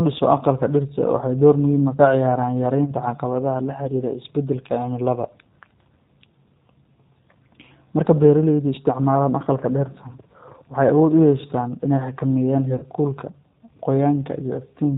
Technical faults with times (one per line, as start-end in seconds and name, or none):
0.00-14.97 G.729 codec
2.85-2.93 VoIP packet loss concealed by the speech codec
12.76-12.85 VoIP packet loss concealed by the speech codec